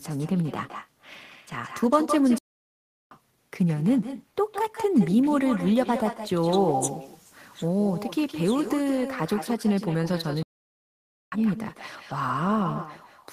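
From the start, the speech carries an echo with no canceller. A second copy of every phrase follows roughly 150 ms behind, about 10 dB quieter. It sounds thinner. The far end is playing the call through a loudspeaker. Its microphone catches that sound and sends it straight back. Nothing strips it out, so the echo shadows the whole clip.

At 2.38 s the speech cuts to silence. It resumes at 3.11 s, after a gap of about 0.73 s. A second gap runs from 10.43 s to 11.32 s, lasting about 0.89 s. Each one stops the sound mid-flow. These are playback stalls. The likely cause is the player running short of audio data, or its thread being held up, until output could restart.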